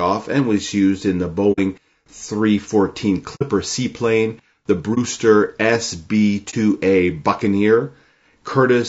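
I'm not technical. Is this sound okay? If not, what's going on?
No. Low-delay AAC compression runs through the whole clip: the speech sounds rough and grainy throughout, and the damage is plainly audible. This is likely the result of the low-delay AAC used in video calls. To keep delay short, it works on very small slices of sound, which capture the pitch of a voice poorly. Roughness creeps in between the tones of the voice, and the top end thins out.

AAC frame loss with muting occurs at 1.52 to 1.59 s, 3.35 to 3.43 s, 4.94 to 4.98 s and 6.50 to 6.54 s. Each time, a small chunk of the audio data went missing, and the player filled the gap with silence. The sound fades out briefly and fades back in, leaving soft-edged holes. The first two gaps are longer than the last two.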